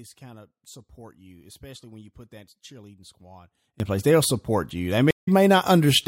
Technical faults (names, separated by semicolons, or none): sudden gain jump; stream reconnect